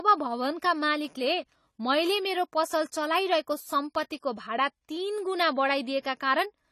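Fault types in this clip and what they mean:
AAC compression: The speech has nothing above 14.1 kHz and plainly audible damage, a dull, smeared quality with fizzy, warbling sibilants and held sounds. This is likely AAC-LC coding quantising its spectrum coarsely, which fits a low bitrate around 32 kbps.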